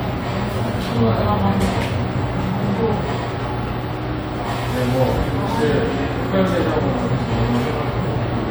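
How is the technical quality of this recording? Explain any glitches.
The technical quality of this recording is good, and there are no glitches to explain.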